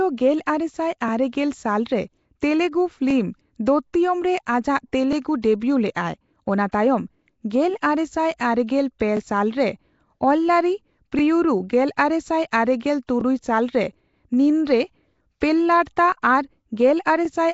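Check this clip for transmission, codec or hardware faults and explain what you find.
Three kinds of fault are audible: codec damage throughout, three short repeats at chunk joins, and one pre-echo.

Nellymoser compression runs through the whole speech clip. The likely cause is the Nellymoser Asao codec at a rate that fits 32 kbps. It codes short blocks with a fixed, small bit budget per sample. Bands that lose out get no bits and are filled in with noise. The damage is plainly audible as a rough, hissy halo around the speech and a smeared, underwater quality. Nothing is present above 7.7 kHz, so the top of the spectrum is missing.

Overlapping chunks occur at 3.11–3.13 s, 9.17–9.19 s and 13.21–13.23 s. The first falls between "ᱟᱨᱮᱜᱮᱞ ᱥᱟᱞ ᱨᱮ ᱛᱮᱞᱜᱩ" and "ᱫᱚᱛᱛᱣᱤᱭᱚᱢ ᱨᱮ". The audio was handled in pieces that fit 2-second chunks, and each piece began slightly before the previous one ended. At each of these joins, about 21.33 ms of sound plays twice. 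This is heard as a brief click or stutter.

Pre-echo occurs at 8.99 s, just before "ᱯᱮ ᱥᱟᱞ". A transform codec spreads its quantisation noise evenly across a block. When a sharp attack sits late in that block, noise sized for the loud onset also fills the quiet gap before it. Here that noise spreads over 16 ms ahead of the attack, so a short hiss comes first and the onset sounds softened and smeared.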